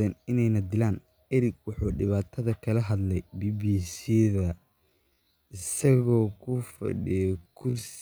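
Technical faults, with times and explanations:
3.57 s to the end, time-stretched section: from 3.57 s the speech abruptly slows to roughly half its earlier pace (0.515 times the speed), yet its pitch stays where it was. That combination sets it apart from slowed playback, which would pull the pitch down with the tempo. The likely cause is software lengthening the audio by repeating short slices to keep pitch, which makes the slowed part drag.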